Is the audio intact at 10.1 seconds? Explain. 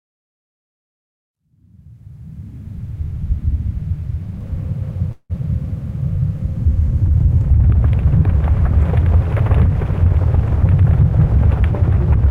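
No. A jitter buffer speed-up runs from 10.08 to 10.16 s. With more audio buffered than its target, the receiver repeatedly cut out short pitch-period pieces, around 70 ms in total, so the sound rushes by at about 199% speed, unchanged in pitch.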